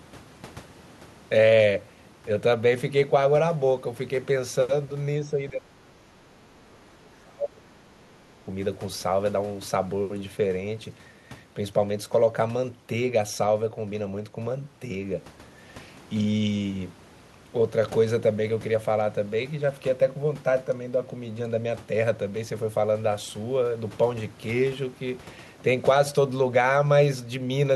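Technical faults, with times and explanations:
5.21–8.33 s, speech suppressed in double talk: the speech sinks and breaks up for about three seconds, at its deepest about 30 dB down. The likely cause is an echo canceller that, with both ends talking at once, could not tell the near talker from loudspeaker echo and attenuated everything. On a waveform the envelope collapses into ragged fragments. A spectrogram shows energy above a few kHz fading and gaps cutting through the harmonics.
7.03–7.15 s, other side's voice leaking through: during that suppressed stretch, a faint second voice surfaces for about a tenth of a second, roughly 35 dB below the main speech. This is likely residual loudspeaker echo that the canceller failed to subtract from the microphone signal. It is barely visible on a waveform. A spectrogram shows a weak, narrow patch of harmonic structure that does not line up with the main talker's pitch.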